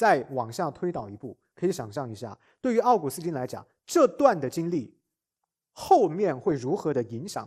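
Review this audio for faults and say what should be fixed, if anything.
Throughout the speech there is a dull, gurgling, granular quality, likely MP2 compression at a low bitrate around 80 kbps. On a spectrogram, upper sub-bands flicker on and off. Encode at a higher bitrate to prevent it.

DAB burbling appears from 0.96 to 1.00 s and again at 6.51 s as brief blips of noise. Bit errors corrupted the audio data in a few frames, which shows as isolated bright spectrogram blocks. Better reception or stronger error protection prevents this.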